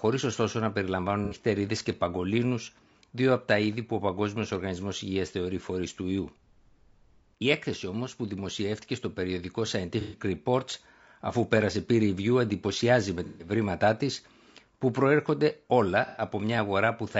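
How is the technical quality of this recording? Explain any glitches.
The quality is compromised: the speech carries steady codec damage throughout, plus four short concealed dropouts.

Low-delay AAC compression is the likely cause of the constant roughness. A low-delay coder like AAC-ELD works on very short frames, which resolve the pitch harmonics of speech poorly and spend bits less efficiently. At a low rate, consistent with about 32 kbps, the voice comes out grainy and rough, with noise filling the gaps between harmonics and a thinned, synthetic-sounding top end that is plainly audible across the whole clip.

AAC frame loss with concealment occurs at 1.25 s after "ωστόσο να περιλαμβάνουν" (about 60 ms), at 10.01 s after "που δημοσιεύτηκε στο περιοδικό" (about 120 ms), at 13.25 s (about 150 ms), and at 16.07 s after "που προέρχονται" (about 90 ms). Compressed frames went missing, and the decoder patched each gap by extrapolating from the last good spectrum. 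The result is a brief smeared, noisy, phasey blur in place of clean sound.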